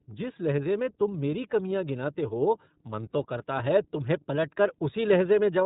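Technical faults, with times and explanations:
Throughout: iLBC codec. The speech is band-limited to 3.8 kHz and carries plainly audible roughness, a slightly synthetic edge that fits 30 ms frames coded at 13.33 kbps. Each frame's excitation is coded independently, so the coarse texture renews at frame boundaries without smearing from one frame into the next. A plain low-pass filter would dull the sound without this roughness, and wideband codecs keep content above 4 kHz.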